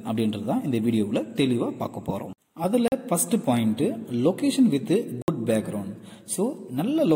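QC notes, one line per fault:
2.88 to 2.92 s, block of digital silence: a short hole of 40 ms, where the sound drops straight to silence and back with no fade, as when the output buffer is not filled in time.
5.22 to 5.28 s, block of digital silence: the same abrupt 60 ms dropout, longer and heard as a brief gap.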